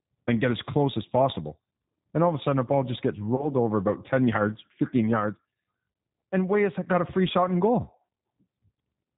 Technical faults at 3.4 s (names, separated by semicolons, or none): G.729 codec; VoIP packet loss concealed by the speech codec